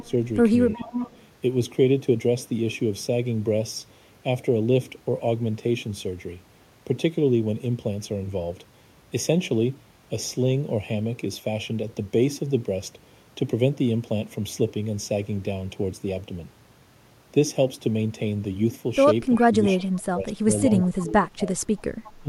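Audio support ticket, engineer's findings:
Channel delay (comb filtering), whole clip. Hollow, phasey speech with a fixed notch around 1.5 kHz and further evenly spaced notches above it. Mechanism: one channel trails the other by a fraction of a millisecond, roughly 0.3 ms. At mono downmix the shared content cancels at regular frequency intervals. Check channel alignment and buffering ahead of the mono sum.

Echo leak, 0.00–0.11 s, 0.75–1.23 s, 19.35–19.81 s, 21.78–22.11 s. A delayed copy of the speech trails about 351 ms behind, at about -20, -10, -20 and -25 dB relative to the direct speech. The 0.75 s instance is the most audible. Likely far-end loudspeaker pickup that the echo canceller did not fully remove and sent back.

Speech suppressed in double talk, 0.01–0.09 s, 0.76–0.92 s, 19.38–21.60 s, 22.22 s to end. The speech level dips during overlapping activity, by about 5 dB in the two early spots and about 20 dB in the later two. 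In the long 19.38–21.60 s stretch, around 1.5 s in total is pulled down. Likely the echo canceller mistaking the local talker for echo during double talk and attenuating both.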